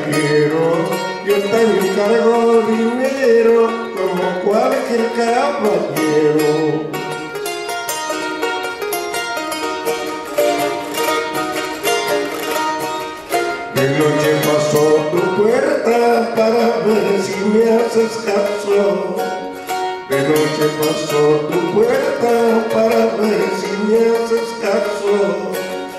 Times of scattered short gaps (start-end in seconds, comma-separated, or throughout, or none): none